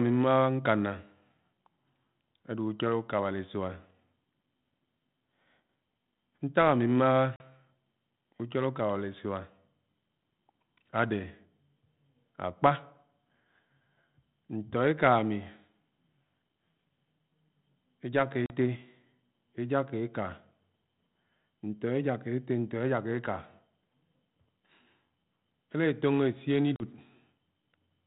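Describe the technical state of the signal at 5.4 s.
At 5.4 s the speech is intact, carried on the 32 kbit/s G.726 ADPCM path with its telephone-band limit and no fault at that moment.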